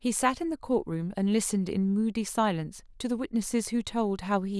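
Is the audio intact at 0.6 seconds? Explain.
Yes, at 0.6 seconds the audio is intact, with no dropout, glitch or other fault audible at that point.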